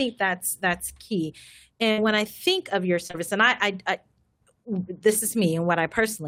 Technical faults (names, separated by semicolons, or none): burst of packet loss; short concealed packet loss